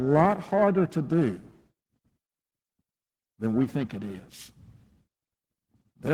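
Throughout the speech, periodic clock jitter at about 1 kHz shakes the converter's sampling timing, putting sidebands about 1 kHz above and below every component. This gives a rough, metallic edge that is strongest on high frequencies. Unlike hiss, it vanishes during silences.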